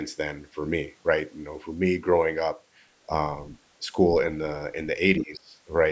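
At 5.18 s, a faint scrap of a second voice slips in, far below the talker, until 5.23 s. That's the other side's voice leaking through, likely loudspeaker echo the canceller didn't fully remove. Right alongside it, from 5.18 to 5.55 s, the talker's speech is pushed down by around 25 dB, for a bit under half a second. That's speech suppressed in double talk, likely the echo canceller ducking everything while both ends overlapped.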